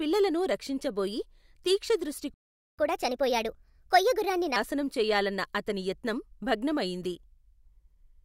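At 2.34 s the speech cuts to silence for about 0.44 s, a playback stall. The player likely ran short of buffered data. From 2.79 to 4.56 s comes catch-up at higher speed. The backlog plays 1.25 times fast, pitch rising about four semitones, then settles back to normal.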